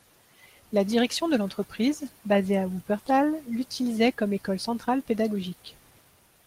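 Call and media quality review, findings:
No audible defects found in the speech path on review; nothing to flag for this call.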